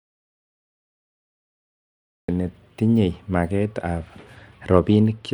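From the start of the clip until 2.28 s there is an audio dropout to silence: the gap is already under way when the clip begins, and it is plain silence with no room tone at all. That points to the input being lost upstream, likely through a disconnected source or a failed link, while the recorder kept writing empty samples. Any speech during that stretch is missing, and the voice enters abruptly once the signal returns.

From 3.61 s to the end of the clip the speech shows a Bluetooth SBC bit pool drop. The upper frequencies lose their air and definition, and a grainy, gritty texture sits on the voice. That is the encoder cutting back its allocation under link pressure, which fits a bit pool falling from 31 to 15, around 105 kbps. The highest sub-bands get few or no bits, and the rest are quantised coarsely.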